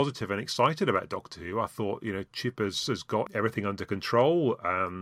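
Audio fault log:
No technical faults can be heard anywhere in this speech recording.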